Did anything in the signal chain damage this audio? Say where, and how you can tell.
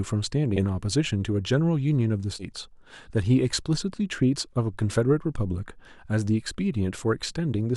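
Yes, at the codec stage: compressed frames were skipped at 0.56 s and again from 2.39 to 2.45 s. The speech jumps forward, losing about 70 ms the first time and about 150 ms the second, which fits whole 10 ms frames going missing or being rejected by the decoder. Unlike a buffer dropout, there is no silent gap; the audio simply jumps ahead past the missing frames.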